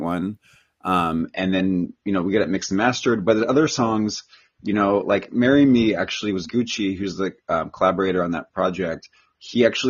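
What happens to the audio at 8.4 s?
At 8.4 s the speech is still inside a stretch where an adaptive stream at a lower bitrate is playing, running from 1.21 s to the end of the clip. When the connection slowed, the player switched abruptly and without a gap to a cheaper encoding, which fits a fall from roughly 96 to 24 kbit/s AAC. At that point the treble is gone above 7 kHz, leaving the speech dull and band-limited, with audible codec artefacts.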